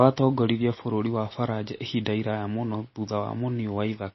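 Speech, with plainly audible MP3 compression all the way through: it likely came from a starved encoder around 24 kbps, cutting everything above 5.8 kHz and leaving watery, swirly sibilants.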